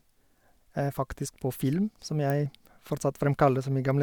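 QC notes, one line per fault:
2.30 s, electrical switching spike: a nearby switch, motor or static discharge likely arced and the audio line picked up the burst of current as a brief voltage jolt. It lands just after "på film som" as a single sharp snap, over almost as soon as it starts, peaking around -20 dBFS. Because it is added energy rather than a gap, it sits on top of the speech without interrupting it.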